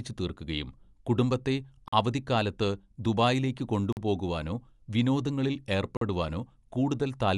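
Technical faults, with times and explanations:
Throughout: Dolby Digital compression. The speech sounds dull and band-limited, with nothing above about 11.5 kHz, and a rough, fluttering noise clings to voiced tones. This damage is plainly audible and fits an encoding at around 64 kbps, likely AC-3 style coding, where the encoder narrows the band and starves many frequency lines of mantissa bits, so the decoder fills those lines with dither noise that flutters from block to block.
1.88 s, 3.93 s and 5.97 s: gap between chunks. Three short holes, each 44 ms long, break the speech at a steady interval of about 2 s. The audio was delivered in 2 s chunks, and a stretch of silence was inserted at each join, likely from padding or from a player starting each chunk late, so nothing is lost but the flow is cut at every boundary.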